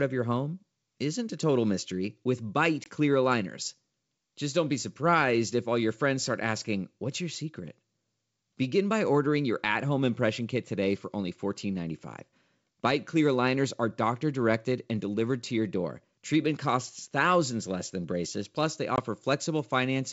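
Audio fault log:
2.84 s and 18.96 s, packet loss on an ADPCM call: each time a single packet's worth of sound, about 20 ms, drops out, first between "total mystery with" and "clear aligners", then right after "than braces plus they". The waveform shows a flat, hard-edged hole and the spectrogram a sharp vertical blank across the G.722 band up to 7 kHz. The decoder's predictor and step size then lag the sender's, so the speech returns slightly distorted and settles within tens of milliseconds.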